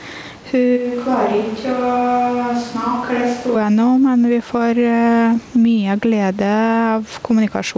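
A short speech recording with two faults in it. The whole way through there's gain pumping. The gain ducks by something like 10 dB as soon as the talker gets loud, so the dynamics feel squashed and breathing. That's likely the input gain set far too hot with a fast limiter or compressor yanking it back down on each peak. Then from 0.78 s to 3.54 s it sounds like a switch to a distant microphone. The sound abruptly goes hollow and roomy, thinner in the low end and roughly 10 dB quieter, and the room noise comes up to only around 25 dB under the speech before it snaps back to the close sound. Likely the close mic dropped out and a farther one, maybe the camera's, filled in. Outside that stretch the room noise sits well down, about 33 dB below the speech, and nothing is audible above 8 kHz, which fits a G.722 call link.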